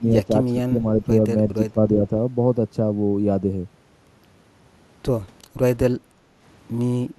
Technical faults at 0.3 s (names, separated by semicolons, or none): speech suppressed in double talk